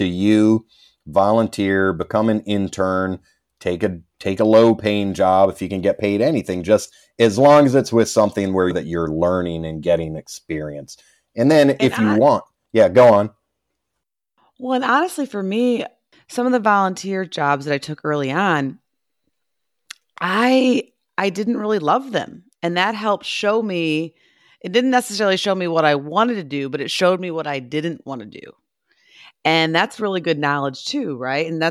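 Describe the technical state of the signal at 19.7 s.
At 19.7 s the speech signal is intact, with no audible dropout, distortion, noise burst or other fault.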